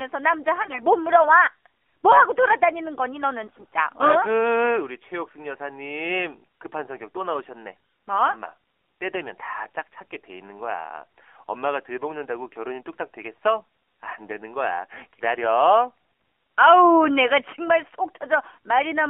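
The whole clip passes through the AMR narrowband mobile codec. The band runs from about 300 Hz to 3.4 kHz, so there are no lows and no top end. The codec rebuilds the speech from a vocal-tract model driven by sparse pulses. The damage is plainly audible. The speech sounds buzzy and synthetic, which fits a low rate near 7.4 kbps.

AMR bit errors strike from 0.62 to 0.82 s and again from 3.44 to 3.65 s. Bits in the weakly protected part of each frame arrived flipped, at a rate of roughly one in twenty. The frame checks still passed, so the decoder used the bad data. The excitation pulses landed in the wrong places, and the fine gain and spectral values drifted. Pitch and level hold roughly steady. The speech turns hoarse, scratchy and gargly.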